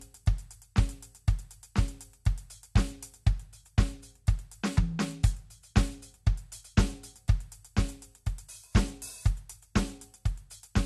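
Throughout, the music sounds dull, with nothing above 12.2 kHz: likely low-bitrate audio saved at a high bitrate, which keeps the earlier encode's losses.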